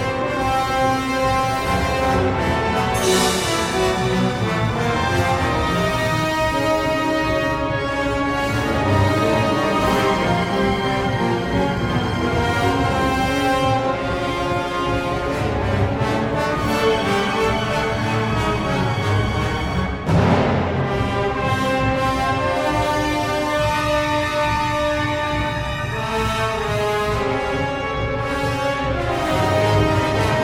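No technical faults are audible anywhere in this audio.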